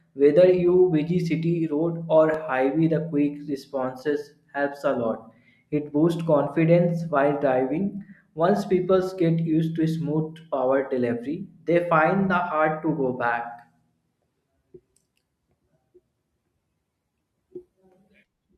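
A dropped buffer (overrun) at 2.34 s, between "you busy city road" and "highway the quick responses", is heard as a jump where the speech skips forward without any gap of silence. Only a few milliseconds of audio are missing, too little to remove a whole syllable. The likely cause is that the recording software failed to collect a block of samples before the hardware overwrote it, so the audio on either side of the lost block was butted together.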